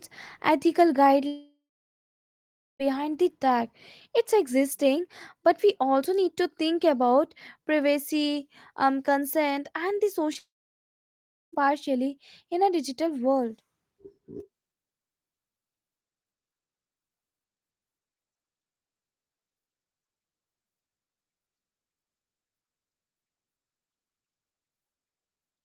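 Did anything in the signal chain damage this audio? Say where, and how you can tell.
Yes. From 1.27 to 2.81 s and again from 10.39 to 11.54 s the sound trails off into a fading buzz or hiss, then sits in silence for about 1.2 s and 1.05 s before resuming mid-flow. That points to a likely long network dropout, with roughly 1.5 s and 1.1 s never delivered.

Just before the second gap, between 10.33 and 10.37 s, there is a brief smear where about 20 ms of audio is missing and the receiver stretched the preceding sound to cover it. That is short concealed packet loss on the network path.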